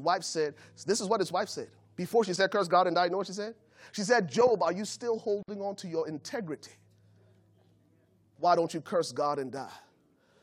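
At 5.43 s, between "are you still" and "on to your integrity", a gap at a join of encoded pieces cuts the speech for 55 ms. Encoder delay and end padding were left in at the join. It sounds like a dropout; waveforms show a flat stretch with slightly smeared edges, spectrograms a narrow blank band.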